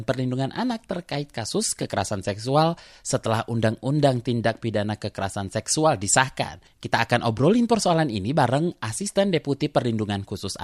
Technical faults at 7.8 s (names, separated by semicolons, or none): none